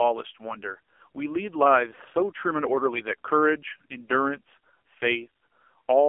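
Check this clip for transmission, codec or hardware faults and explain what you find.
Two faults here, one running the whole way and one brief dropout.

Throughout, the audio carries AMR narrowband mobile codec coding. Everything sits between roughly 300 Hz and 3.4 kHz, and heavy codec damage makes the speech buzzy and synthetic, which fits a low AMR-NB mode around 5.9 kbps that rebuilds speech from a vocal-tract model and sparse pulses.

From 1.96 to 1.99 s there's a lost AMR speech frame, which fits a single 20 ms frame failing its check. The decoder filled the gap by repeating the last good pitch and vocal-tract settings at lower gain, so you hear a quick dip or warble before the speech picks back up.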